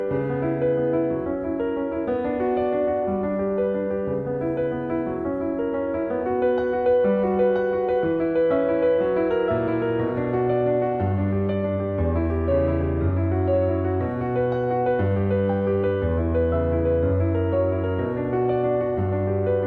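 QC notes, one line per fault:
No faults heard.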